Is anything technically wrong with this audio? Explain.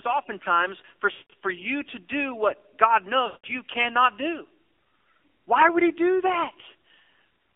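Yes. The speech has passed through the AMR narrowband mobile codec throughout, with energy confined to roughly 300 Hz to 3.7 kHz. The vocal-tract model runs at a low rate, which fits an AMR mode near 7.4 kbps, so the voice sounds buzzy and synthetic. A spectrogram shows a flat ceiling just under 4 kHz and smeared, blocky harmonics.

There are also lost AMR speech frames, from 1.12 to 1.30 s, between "oftentimes for" and "you to do what", and from 3.26 to 3.47 s, just before "you cannot do". Each gap lasts about 180 ms, which fits nine consecutive 20 ms frames. The decoder repeats its last pitch and spectral settings at falling gain, so the sound drags out and fades. The waveform tapers toward silence, and the spectrogram shows a frozen harmonic stripe that dims.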